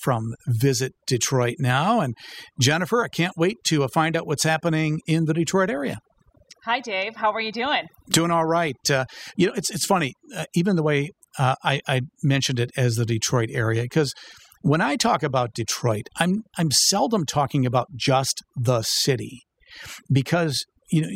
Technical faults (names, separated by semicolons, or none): overdone noise removal